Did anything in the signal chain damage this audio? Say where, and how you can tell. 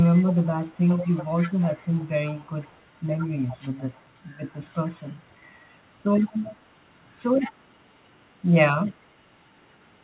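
Yes, an echo leak at the call-processing stage. A faint copy of the speech trails it by 90 ms at 0.15–3.0, 3.18–4.05, 4.49–5.22, 6.18–6.56, 7.38–7.53 and 8.86–8.97 s, from about 15 dB down to barely audible. The likely cause is a far-end echo canceller leaving loudspeaker pickup in its return.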